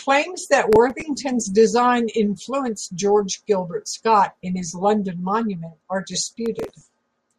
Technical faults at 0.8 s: processor overload crackle

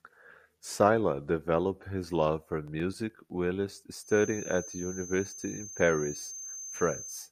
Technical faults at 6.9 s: feedback whistle

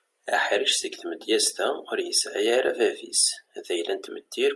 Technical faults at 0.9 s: none

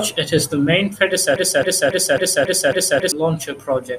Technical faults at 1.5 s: broken-record loop

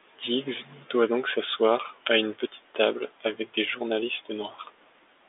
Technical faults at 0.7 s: none

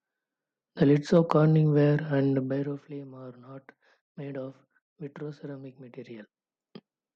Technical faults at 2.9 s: zipper noise

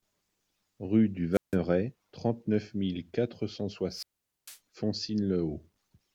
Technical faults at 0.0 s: none

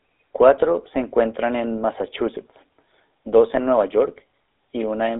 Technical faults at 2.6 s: GSM full-rate codec

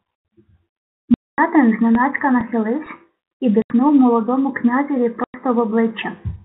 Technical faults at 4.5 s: none

